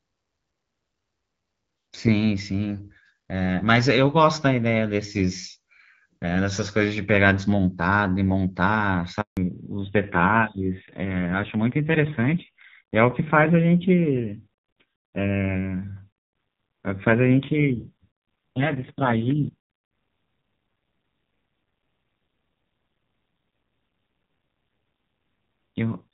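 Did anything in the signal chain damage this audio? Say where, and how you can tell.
Yes. A handover gap at 9.21 to 9.37 s is a network-stage fault. The speech decays within a few tens of milliseconds and then stays silent for 160 ms. The call was being moved between networks, and nothing reached the receiver until the new link came up, so whatever was said in that stretch is simply gone.

A fallback to narrowband runs from 9.37 s to the end of the clip and happens at the codec stage. Before the gap, the speech carries the wideband band of HD Voice, with only light coding roughness. After it, all content above 4 kHz disappears, and the sound turns dull and raspier. This points to a switch from AMR-WB at around 12.65 kbit/s down to narrowband AMR at a low rate, likely 5.9 kbit/s.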